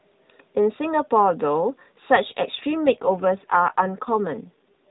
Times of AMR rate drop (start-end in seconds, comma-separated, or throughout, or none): 2.69-4.90